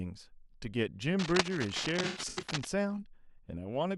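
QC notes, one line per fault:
1.19–2.68 s, cable scratch noise: dense, uneven scratchy rustling sits over the speech, at about 5 dB below it, so it's quite prominent. That's likely a worn cable or connector being moved, with its contact resistance jumping around rapidly.
2.03–2.47 s, AAC frame loss with concealment: the speech goes smeared and phasey in patches as the decoder patches gaps from the last good spectrum. About 256 ms is missing, scattered across roughly 430 ms, with the longest dropout around a tenth of a second.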